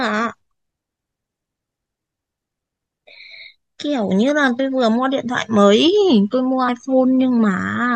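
Three short glitches break through the speech, at 2.37 s, 4.59 s and 6.68 s. These are damaged data in a compressed stream: at each point part of the encoded data was lost or corrupted, so the decoder misread the affected frames, lost its place, and had to hunt for the next valid frame header before normal decoding resumed.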